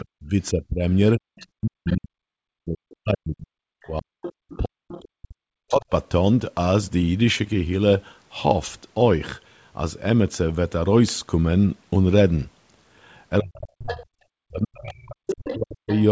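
From 0.02 to 5.9 s the talker's speech dips hard, by roughly 40 dB at its deepest and for about four seconds in all. This is speech suppressed in double talk, likely because the echo canceller mistook both voices for echo. Unlike a dropout, it swells and fades with the other party's activity. Within that stretch the other side's voice leaks through faintly, well below the talker, at 1.39–1.96 s and 5.69–5.85 s, and louder, about 15 dB down, at 4.22–5.04 s. A second, separate voice is heard, rather than a smeared copy of the talker, which is likely residual loudspeaker echo. The same suppression returns from 13.4 s to the end, again cutting the talker by around 40 dB. Leakage comes through at 13.55–14.05 s and again from 14.77 s onward, where it rises to within about 10 dB of the speech. The 8 kHz ceiling throughout comes from the wideband call path.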